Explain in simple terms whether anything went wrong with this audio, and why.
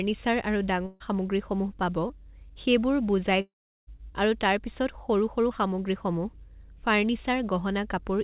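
Three separate gaps in the speech can be heard, all typical of audio sent over a network call.

At 0.86 to 1.02 s there is a burst of packet loss. About 140 ms of speech never arrived, so the receiver kept stretching the last sound, which turns into a fading buzz or hiss. Speech then picks up slightly further on, with that piece missing.

At 2.08 to 2.11 s there is a short concealed packet loss. Roughly 20 ms of audio went missing and the receiver patched the hole by continuing the previous sound before blending back in. It comes across as a brief smear or wobble in the speech.

From 3.41 to 3.89 s there is a long network dropout. Nearly half a second of speech is gone. The last sound is carried on briefly and fades, leaving about 0.37 s of silence before speech resumes further along. A stall in the network is the likely cause.

The whole recording also sounds narrow, like a telephone, because nothing above 4 kHz comes through. 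That is normal for this kind of call connection and is not a fault.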